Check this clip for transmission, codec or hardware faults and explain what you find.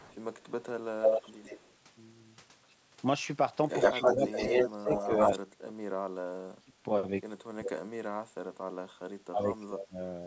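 Two faults are present: a returning echo and speech that drops out while both sides talk. The audio stops near 8 kHz, which fits a wideband G.722 call path.

Echo leak: from 0.0 to 0.51 s, 1.01 to 1.74 s and 3.69 to 5.34 s, a delayed copy of the speech trails the original. The likely cause is a far-end loudspeaker echo that the canceller did not fully remove. The first is faint and lags 180 ms. The later two lag 112 ms: the second is roughly as loud as the speech itself and the third is about 5 dB louder. A fixed lag of a tenth of a second or more sets it apart from room reverberation.

Speech suppressed in double talk: from 3.95 to 6.73 s, 7.54 to 8.17 s and 9.28 to 9.98 s, the speech sinks sharply, very deeply in the first two spans and less in the last. This is likely an echo canceller muting its own talker while the other side speaks. The dips coincide with overlapping talk rather than landing at random, which separates them from packet-loss dropouts.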